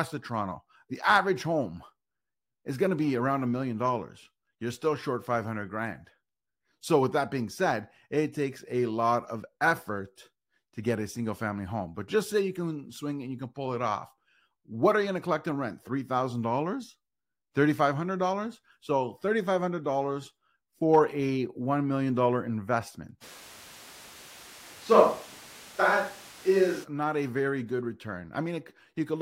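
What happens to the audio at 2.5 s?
Nothing goes wrong at 2.5 s; the speech carries on intact through that moment.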